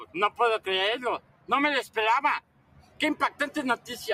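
From start to finish a noise suppressor applied to music or sounds is at work. A processor tuned for speech treats sustained tones, ambience and reverberant tails as noise, so the level rides up and down by some 15 dB as it decides what to keep. Onsets pass intact while held material sinks, which gives a fluttering, pumping, thinned texture. Unlike a compressor, the dips follow steadiness rather than loudness, and unlike a gate, the sound never fully closes.

The sound is cut by the noise suppressor three times. From 0.05 to 0.39 s, about a fifth of a second of it drops by up to about 14 dB. Between 1.19 and 1.5 s, roughly a third of a second falls by up to about 16 dB. From 2.41 to 3.0 s, around half a second sinks by up to about 17 dB. In each case the sustained part or decay is cut short while the attacks survive. This is what separates these dips from dropouts, which would silence attacks too.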